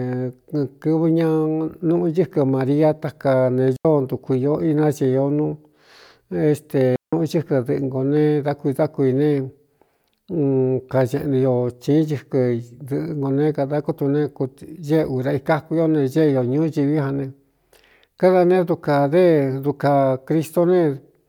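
Digital wireless dropouts occur at 3.76 to 3.85 s, right after "maria taka ne" and before "ntuku īo", and again at 6.96 to 7.13 s. Each time the radio link lost too much data, so the receiver muted the speech with a very fast fade rather than passing corrupted audio. The first hole lasts about 85 ms and the second about 168 ms, both heard as clean gaps of near silence with no noise burst on either side.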